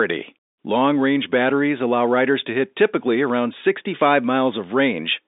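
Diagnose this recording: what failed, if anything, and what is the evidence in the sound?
Nothing in the recording has failed. The speech comes through a G.711 telephone coding path whose band runs from about 250 Hz to 3.7 kHz, with nothing above 3.8 kHz, as a fixed-line call would sound.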